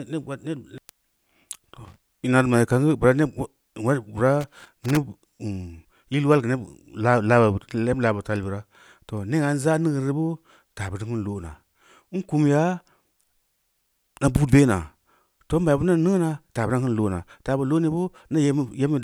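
Two short bursts of irregular crackle and scratching break into this speech recording, the first from 1.85 to 2.04 s and a longer one from 4.41 to 4.97 s. This is loose connector crackle: a worn or dirty contact somewhere in the cable run is rapidly making and breaking as it shifts, chopping the signal into fragments, while any DC present on the line adds sharp pops at each interruption.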